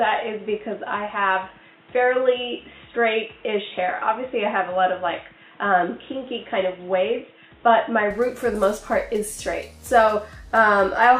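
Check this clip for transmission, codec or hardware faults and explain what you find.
One fault is present. From the start to 8.11 s, the input sounds as though it has switched to a poorer device, likely a different microphone or a headset running in its call profile. That path carries nothing above 3.8 kHz, so the sound is dull and boxy, with its own background noise sitting roughly 35 dB down. At 8.11 s the full band returns abruptly, with no gap at the changeover and no obvious jump in loudness.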